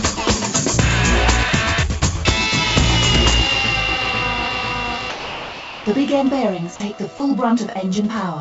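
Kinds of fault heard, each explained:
Sound dropped by the voice detector: at 5.10 to 5.86 s the sound gives way to steady, featureless noise for about three quarters of a second before coming back, with two much briefer swaps at 6.76 to 6.80 s and 7.18 to 7.20 s. The likely cause is the sender's voice detector treating those stretches as background and going quiet, so the receiver filled each gap with comfort noise, all within the G.722 call path's 8 kHz top end.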